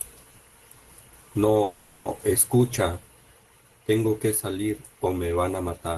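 From 1.63 to 2.08 s a call audio freeze stretches the last sound into a fading buzz or hiss for 420 ms, likely from late packets emptying the jitter buffer. Speech then resumes intact, just delayed. A spectrogram shows smeared horizontal bands; the waveform shows a decaying, repetitive envelope.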